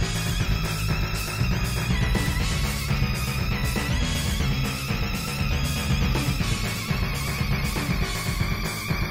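Throughout the sound, a doubled audio track is heard. A full-band second copy trails about one and a half seconds behind, at roughly equal level. It has no decay or room colour. This likely comes from a slow second capture path or misaligned edit.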